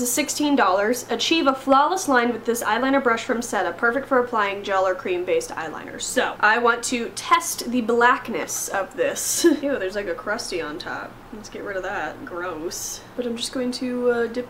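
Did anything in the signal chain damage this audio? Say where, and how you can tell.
Yes. Hard clipping at 1.49 to 1.73 s, 6.48 to 6.70 s and 7.33 to 7.35 s, most likely at the converter or a gain stage just before it. Each burst carries a brittle crackle on the loudest peaks. The first and last are driven roughly 4 dB past full scale and the middle one only barely reaches it. The waveform tops are sheared flat there, and those square edges spray high harmonics well above the source's own content.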